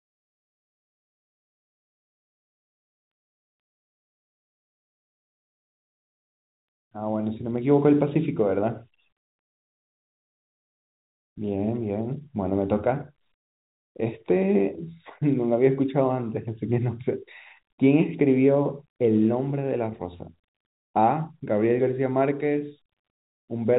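Nothing goes wrong anywhere in this stretch of speech, which comes across with the narrow, boxy tone of an ordinary G.711 phone line, nothing reaching above about 3.8 kHz.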